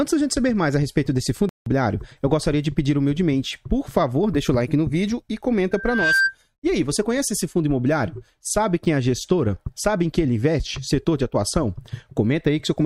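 At 1.49 s the audio drops out abruptly into silence until 1.66 s. That's a corrupt frame muted: the decoder rejected damaged compressed data and the player filled the gap with nothing. The 0.17 s hole fits about two lost frames, and the timing carries on intact.

From 5.71 s a loudspeaker feedback squeal takes over. A mic is hearing its own speaker, and at 1.6 kHz the loop gain tops one, so that tone feeds itself. It swells over roughly 0.4 s to sit about 5 dB above the programme, then stops at 6.36 s.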